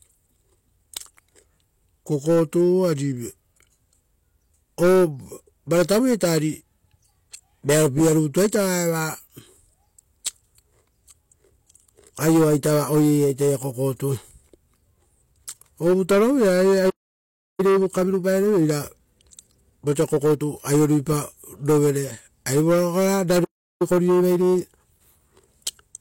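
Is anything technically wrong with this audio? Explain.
Yes, there are two playback stalls, each followed by time-compressed catch-up. The player likely ran short of data or was blocked, so the speech cuts out at 16.89 to 17.60 s (about 0.69 s) and at 23.44 to 23.82 s (about 0.36 s). After each gap it clears its backlog by trimming and cross-fading small pieces. The speech then runs hurried at normal pitch, at 1.15 times speed from 17.60 to 20.60 s and at 1.1 times speed from 23.82 s to the end.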